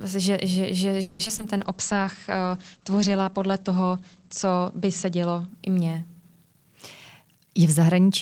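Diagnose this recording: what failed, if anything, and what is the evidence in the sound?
Repeated packet loss (robotic sound) on the network leg, from 1.01 to 1.44 s, just after "že že". Six gaps were patched by extending the last sound, with the longest near 180 ms and about half the span concealed. The speech turns choppy and robotic, with fragments missing.

A call bitrate drop, in the codec stage, runs from 1.57 to 7.16 s. The encoder fell from 32 to 11 kbps and its bandwidth narrowed from 20 kHz to 8 kHz, bottoming out for about 2 s. The speech sounds muffled, rough and watery until the rate recovers.

A jitter buffer slow-down, from 1.77 to 2.37 s, comes from the receiver repeating pitch periods to rebuild its reserve. About 41 ms is added, playing at 94% speed. The speech drags slightly at unchanged pitch and stretches out.

A jitter buffer speed-up, from 7.22 to 8.07 s, comes from the receiver trimming pitch periods to shed excess delay. 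Roughly a tenth of a second is removed and playback runs at 110%. The speech sounds hurried while its pitch stays put.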